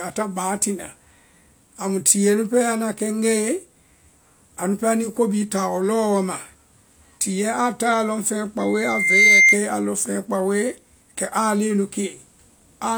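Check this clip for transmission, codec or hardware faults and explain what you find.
One fault is present. From 8.60 to 9.60 s, just before "a lɔŋ feŋɛ", there is loudspeaker feedback squeal. The microphone re-amplifies its own loudspeaker at 2.1 kHz. The tone swells over about three quarters of a second to about 10 dB above the speech.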